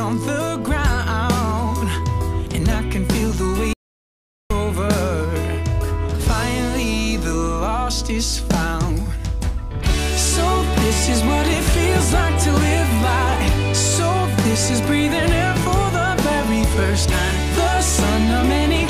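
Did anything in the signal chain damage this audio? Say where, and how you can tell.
Yes. There is an audio dropout to silence from 3.73 s to 4.50 s, cutting out about 0.77 s of the sound. The signal stops mid-flow and returns just as abruptly, and the gap is silent with no room tone or noise floor underneath. That points upstream of the recorder: the input was likely lost at the wiring, device or link stage while the recorder kept writing silence, so whatever happened in that stretch is gone.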